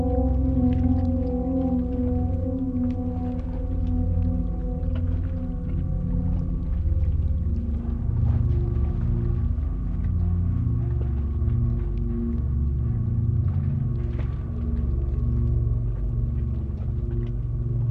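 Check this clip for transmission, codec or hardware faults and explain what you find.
Nothing here points to a transmission, codec or hardware problem, and the sound comes across without any dropouts, glitches or other damage worth flagging.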